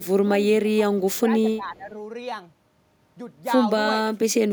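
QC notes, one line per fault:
0.63–0.68 s, 0.97–1.29 s and 1.57–1.91 s, speech suppressed in double talk: the speech level dips briefly. The first dip is about 10 dB. The middle one is deepest, about 15 dB. The last is a mild pull-down of about 5 dB. The likely cause is an echo canceller ducking the near talker while the far side spoke. On the waveform the envelope pinches inward.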